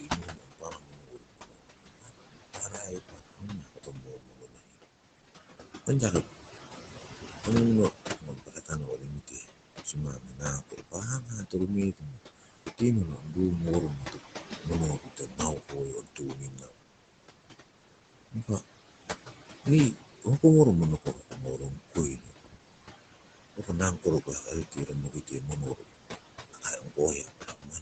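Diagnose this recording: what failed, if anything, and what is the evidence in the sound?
The call processing stage failed, in its noise suppressor. These are noise suppressor artifacts. The room noise, only about 9 dB under the speech, is pulled down by about 19 dB in the gaps. It swells back under each phrase. The noise is lowered frame by frame.

The same suppressor also cut speech. This is at 0 to 4.76 s, 7.45 to 16.83 s, 18.31 to 18.62 s, 19.63 to 20.44 s, 21.02 to 22.58 s, and 23.56 s to the end. Soft sounds were treated as noise. They drop by up to about 22 dB and sound swallowed.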